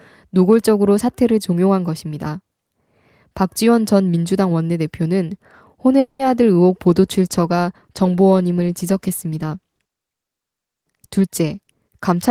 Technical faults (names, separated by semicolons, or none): call audio freeze; call bitrate drop; jitter buffer speed-up